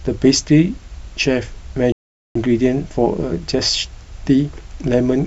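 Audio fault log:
1.92–2.36 s digital broadcast dropout: the receiver lost valid frames and muted, cutting the speech to silence for about 0.43 s, and that material is gone.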